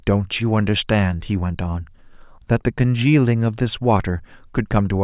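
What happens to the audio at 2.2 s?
Nothing happens to the audio at 2.2 s; the speech continues through that moment without any audible dropout, click, distortion or other fault.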